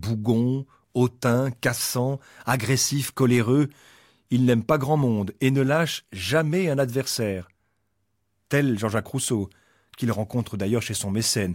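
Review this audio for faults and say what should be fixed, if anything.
A steady buzz at about 43.1 Hz runs through the whole speech clip, with the pace unchanged. This is a block size mismatch (truncated): one stage writes longer blocks than the next reads, dropping each block's tail, which fits 1024-sample blocks at that rate. Matching the block sizes between the writing and reading stages would prevent it.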